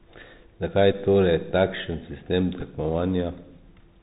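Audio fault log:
throughout: Bluetooth CVSD headset codec. The speech stops sharply at 4 kHz, a flat ceiling on the spectrogram. The adapting one-bit step leaves a grainy hiss and scratchy s sounds, consistent with a 64 kbps CVSD link.
0.92–0.94 s and 2.61 s (just after "takšen sistem"): Bluetooth headset packet repeated. The same audio repeats, giving brief buzzy ticks. On the waveform these appear as short copied segments that fit about three and two lost packets, roughly 11 ms and 7.5 ms.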